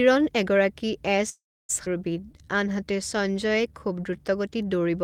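A brief crackle at 0.07 s, just before "এগৰাকী এ'চ", marks hard clipping on this speech recording: the peak ran about 1 dB past what the signal path could carry, so its top was sheared flat and produced a burst of high harmonics. After "এগৰাকী এ'চ", from 1.29 to 1.71 s, the sound stalls into a fading fill that drops to silence for roughly 0.29 s, then resumes exactly where it stopped. That pattern is a call audio freeze, likely from packets held up in transit while the jitter buffer ran dry, so about 0.4 s of delay was inserted and nothing was lost. Moments later, at 1.85 to 1.88 s, playback lurches forward, a skip ahead in which about a fifth of a second of audio was dropped and the two sides were butted together, clawing back some of that built-up delay. From 2.2 to 4.18 s the speech drags at an unchanged pitch, running at 89% speed. This is jitter buffer slow-down, where single pitch periods and slivers of pauses were repeated to rebuild a reserve, stretching the passage by 232 ms.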